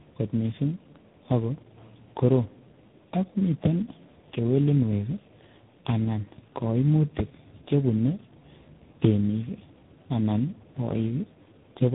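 Right through the clip there's tandem speech coding: speech has been re-coded through what sounds like three low-rate speech codecs in a row, each roughening it further, with nothing above 3.8 kHz.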